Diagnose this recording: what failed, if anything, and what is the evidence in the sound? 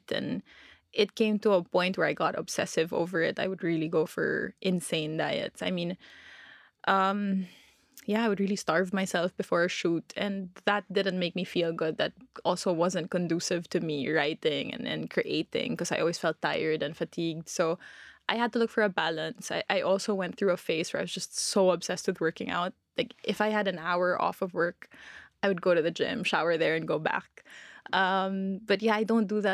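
Nothing failed; no faults heard.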